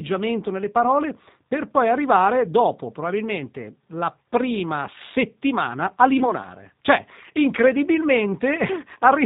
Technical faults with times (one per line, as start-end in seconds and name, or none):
0.00-9.25 G.729 codec
4.23 VoIP packet loss concealed by the speech codec
6.19-6.34 VoIP packet loss concealed by the speech codec